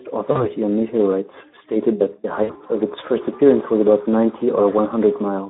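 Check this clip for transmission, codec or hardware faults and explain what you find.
Two faults are present: a low-rate speech codec throughout, and two packet-loss gaps patched over by that codec's concealment.

Speex codec, throughout: the narrow 250 Hz to 3.6 kHz band and a starved excitation fit a bitrate near 11 kbps. The speech sounds hoarse and noisy.

VoIP packet loss concealed by the speech codec, at 0.31 to 0.46 s and 2.43 to 2.53 s: about 40 ms, then 60 ms, of packets went missing. The decoder extended its last pitch and filter, producing a fading smear with lingering weakness afterwards.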